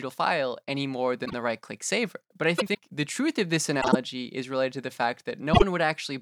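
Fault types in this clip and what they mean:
Frames out of order: at 1.25, 2.58, 3.81 and 5.53 s, two adjacent blocks of speech, 26 to 78 ms each, play swapped, giving a short garbled flutter. The block lengths fit whole 26.1 ms codec frames, and no time is lost.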